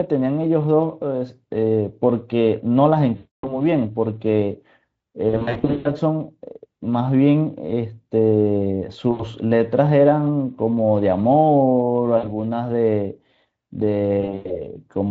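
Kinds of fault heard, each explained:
VoIP packet loss concealed by the speech codec: five times the speech smears into a stretched buzzy tone or coloured noise that fades away: at 3.15 s for about 280 ms, around 5.3 s in short bursts scattered over 560 ms, briefly at 9.11 s and 12.17 s, and in bursts again from 14.21 s. Packets went missing, and the Speex decoder filled each gap by extending its last pitch and filter at falling gain.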